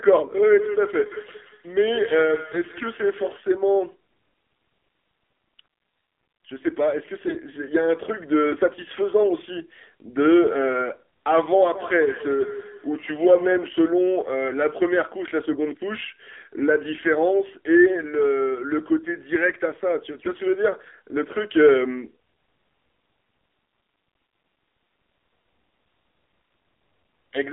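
Throughout, the speech passes through the AMR narrowband mobile codec at a low mode, which fits a rate around 7.4 kbps. The line is band-limited to about 250 Hz to 3.6 kHz, so the sound is thin and muffled, with plainly audible buzzy, synthetic coloration.

From 0.38 to 3.42 s there is feedback echo between two devices. One device replays the other's microphone feed, and that feed is picked up and sent round again. Each syllable returns roughly every 150 ms as a thinner, ringing repeat, peaking at about 11 dB below the speech.

From 7.26 to 7.37 s, AMR bit errors corrupt the less protected bits of a run of frames over roughly a tenth of a second, at an error rate of a few percent. The codec's excitation pulses and fine parameters are misplaced, so the speech briefly turns hoarse and gargly while keeping its pitch and level.

The feedback echo returns from 11.75 to 13.73 s with the same repeat spacing of roughly 150 ms, this time peaking at about 14 dB below the speech.

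From 20.22 to 20.39 s, AMR bit errors strike again across a slightly longer run of frames, at a lower error rate. The same scratchy, gargling roughness appears for under two tenths of a second.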